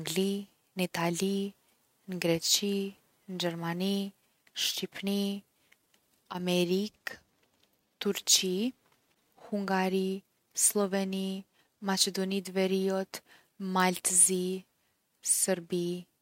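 Nothing stood out on listening to this speech recording.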